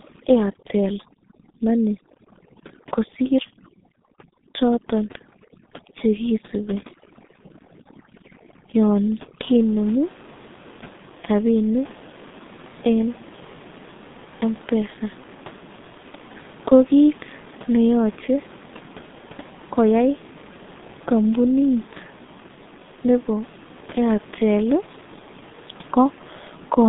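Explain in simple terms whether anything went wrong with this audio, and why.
Yes, two things went wrong. The whole recording passed through the G.723.1 codec, an old low-rate phone codec that keeps nothing above 3.8 kHz, so the speech sounds muffled and hoarse, with smeared consonants. From 0 to 9.4 s, overdone noise removal was applied too strongly; it cuts away quiet parts of the voice along with the room noise, leaving a background that drops away and breaks up into twinkling, warbling specks.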